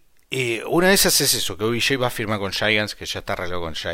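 Speech recording, with no technical faults to report. Nothing in it calls for a time, a value or a cause.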